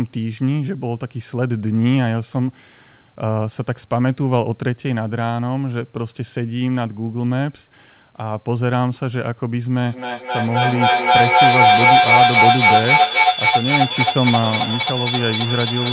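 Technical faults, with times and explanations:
9.85–15.92 s, feedback howl: a piercing tone around 4 kHz swells to about 13 dB above the speech and pulses roughly every third of a second until the end, as sound from a loudspeaker re-enters the microphone and gains level on each trip.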